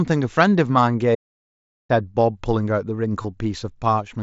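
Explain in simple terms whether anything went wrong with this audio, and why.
Yes, two things went wrong. From 1.15 to 1.89 s the speech cuts off abruptly into dead, total silence for about three quarters of a second, with no background hiss at all. This is an audio dropout to silence: the input was likely lost for a moment, perhaps from a loose connection or a brief mute, while the recording kept running, so whatever was said then is gone.

Later, from 3.22 to 3.25 s, there is a tiny buzzy blip with a slight wobble as normal speech resumes. This is concealed Bluetooth headset packet loss: a few bits of sound between headset and phone went missing, and the phone filled the roughly 20 ms gap by repeating a similar piece of the speech just before it. The headset's wideband connection, which carries the speech throughout, has a slight grainy edge on louder sounds.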